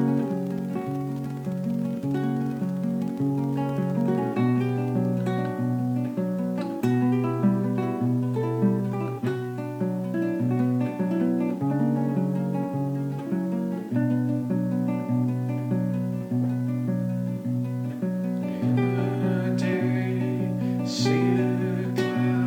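No technical faults can be heard anywhere in the recording.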